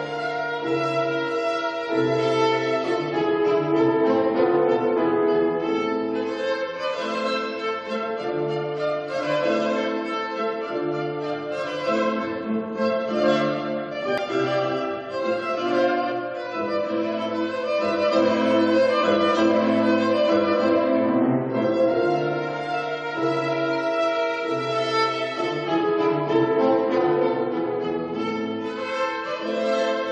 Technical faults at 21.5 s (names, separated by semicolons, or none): none